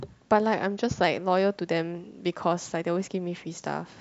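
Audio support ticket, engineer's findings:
Drift correction step, 0.54 to 1.04 s. Speech drops about 114 cents flat, slightly more than a semitone, and runs 6.35% slow. Pitch and tempo fall together, then snap back at 1.04 s. Likely cause: clock-sync resampler stepping playback rate down in one jump to rebalance its buffer. Half a second of detuned, dragged speech. Check drift-compensation logic in the playback path.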